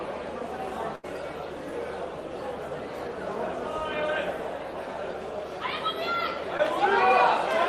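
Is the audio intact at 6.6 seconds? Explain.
No. From 6.57 to 6.61 s there is a brief smear, a tiny wobble where the sound slips instead of continuing cleanly. This is short concealed packet loss: about 20 ms of audio arrived too late, and the decoder patched roughly 14 ms of it by extending the preceding sound before blending back.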